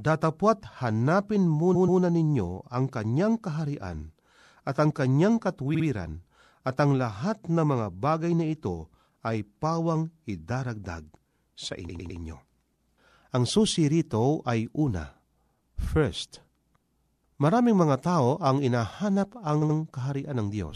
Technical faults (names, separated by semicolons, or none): repeated frames